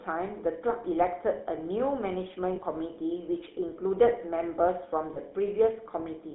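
Throughout, the GSM full-rate codec squeezes the speech into a 250 Hz to 3.6 kHz band with a buzzy, gravelly roughness, which fits 13 kbps coding rather than simple band-limiting. At 2.56 to 2.60 s and again at 5.14 to 5.18 s, lost GSM frames leave a brief rough, metallic ring where the previous frame's settings are repeated, unlike a dropout, which would go silent.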